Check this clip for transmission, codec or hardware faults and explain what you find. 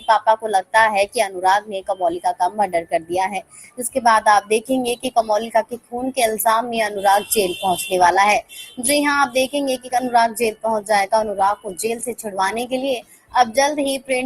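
There's one real problem here, and it's processing rather than transmission: a noise suppressor applied to music or sounds. It runs through the whole clip. A suppressor tuned for speech treats steady tones, ambience and tails as noise, so level swings by around 15 dB as it grabs and releases. You hear held parts sink and flutter while attacks punch through, giving a pumping, hollowed-out feel.

The worst spots are where sound gets cut by the noise suppressor: 1.07–1.96 s (down about 15 dB), 2.5–4.0 s (about 18 dB, the longest stretch), 4.41–5.22 s (about 12 dB), 5.63–5.94 s (about 18 dB), 8.42–8.81 s (about 17 dB), 9.78–9.93 s (about 13 dB), 11.56–11.73 s (about 17 dB) and 13.0–13.35 s (about 18 dB). In each, the sustained material dips sharply or its decay gets chopped short, while the sharper onsets mostly survive.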